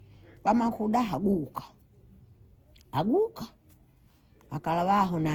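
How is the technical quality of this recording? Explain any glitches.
The recording is degraded by a single fault that runs through the whole clip. Generation loss, throughout: the audio was likely decoded and re-encoded about seven times, with what sounds like Opus at 48 kbit/s. Each pass quantised afresh on a shifted frame grid, so noise piled up. The speech sounds swirly, smeared and hollow, and its attacks are blurred, even though content still extends to 20.3 kHz.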